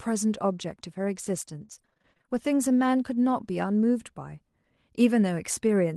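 From 1.61 to 2.38 s speech sounds choppy and robotic. This is repeated packet loss: a dozen gaps up to 27 ms, patched by repeating sound.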